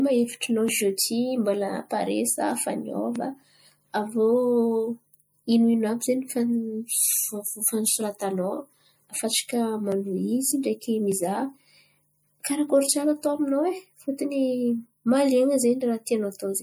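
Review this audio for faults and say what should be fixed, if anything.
Throughout the speech there is plainly audible watery, swirling coloration with smeared consonant onsets and chirpy sibilants, likely MP3 compression at a low bitrate around 64 kbps. Weak spectral lines drop in and out between frames, although content still reaches about 21 kHz. Keep the lossless original, or re-encode at a substantially higher bitrate.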